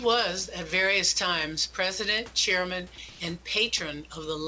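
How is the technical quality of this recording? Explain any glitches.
The recording is speech carried over a call path whose G.722 coding leaves nothing above 8 kHz, with room noise sitting about 30 dB below the speech. There is one glitch, comfort noise in place of the background. From 3.10 to 3.20 s, the real background, about 25 dB below the loud passages, turns into a steady, featureless hiss roughly 1 dB different in level. This is likely discontinuous transmission pausing and the receiver synthesising noise.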